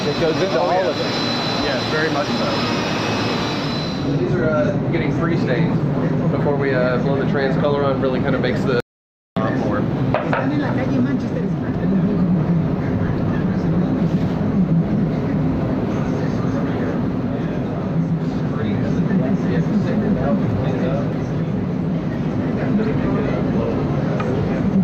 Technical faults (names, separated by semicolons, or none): audio dropout to silence